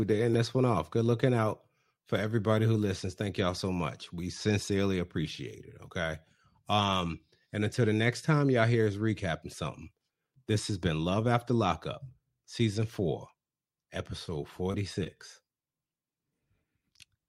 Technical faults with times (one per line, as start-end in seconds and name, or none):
none